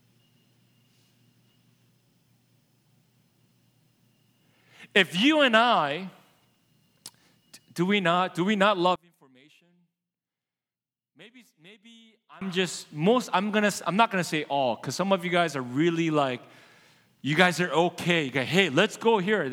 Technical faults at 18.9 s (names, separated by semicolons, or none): none